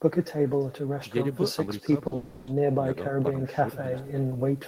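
A speech recording, and the whole way through it carries an echo with no canceller: the far end is evidently playing the call out of a loudspeaker, its microphone picks that back up, and nothing strips it out, so every phrase returns roughly a third of a second later, after the trip through the network. The copy sits about 22 dB under the direct speech, and it comes back thinner than the original, trailing everything said. Around 2.07 to 2.14 s there's a short concealed packet loss, where about 40 ms never made it to the decoder in time. The receiver papered over the gap by carrying on the last bit of sound and then blending back into the real signal, so you get a brief smear or wobble rather than an outright hole. Hard on its heels, from about 2.15 to 2.50 s, a longer stretch of roughly 320 ms is simply not the real audio any more. It's all synthetic fill, the last sound dragged out as a decaying buzz or hiss, never dropping to true silence, before the genuine speech resumes further along with that chunk gone for good. 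That behaviour points to a long network dropout as the likely cause, with the receiver's concealment covering the whole gap.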